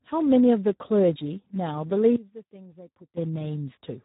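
From start to finish the speech passes through the Speex codec at 8 kbps, a rate too low to encode the excitation properly. The voice comes out heavily damaged: noisy, hoarse and edging toward robotic, with nothing above 3.8 kHz.

From 2.16 to 3.17 s the level falls by about 20 dB and the speech turns faint. This most likely comes from one channel inverted: with one side's polarity reversed, the shared centre content cancels in a mono sum and leaves only a weak difference signal.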